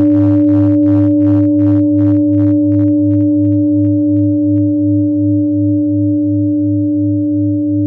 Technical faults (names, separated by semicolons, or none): hard clipping